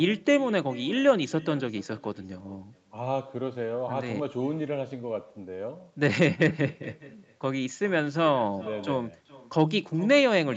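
From start to finish the speech carries an echo with no canceller: the far end's loudspeaker output is being picked up by its microphone and sent straight back, so every phrase is trailed roughly 0.4 s later by a faint, thin copy about 21 dB below the direct sound. On a waveform each syllable burst has a small ghost burst behind it; on a spectrogram the same formant patterns reappear, weaker, shifted right, all under the 8 kHz ceiling of the call path.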